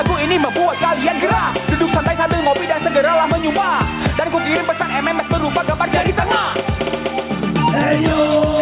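Throughout the clip the level breathes. The gain is pulled down under each loud sound, a swing of around 5 dB. This is gain pumping, likely from input gain set far too high for the microphone, with a fast limiter or compressor clamping down on every peak. Loud and soft passages end up pressed close together, so the dynamics sound squashed. The audio sits in a band ending near 4 kHz, which fits a narrowband G.711 call path.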